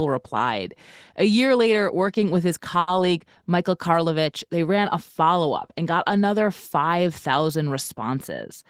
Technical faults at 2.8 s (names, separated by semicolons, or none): short stall from a late packet